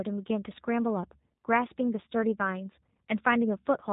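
From start to finish, the speech carries G.729 codec damage, plainly audible. Nothing passes above about 3.8 kHz, so it sounds muffled. Each short frame is rebuilt from a vocal tract filter, a pitch predictor and a few pulses, leaving it rough and synthetic. This fits an 8 kbit/s rate.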